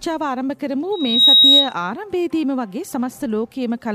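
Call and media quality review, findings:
Single piercing tone at 3.8 kHz, 0.92 to 1.74 s, swelling over roughly a third of a second to about 15 dB above the program. Loudspeaker feedback squeal: mic re-capturing its own speaker output, loop gain above unity at 3.8 kHz.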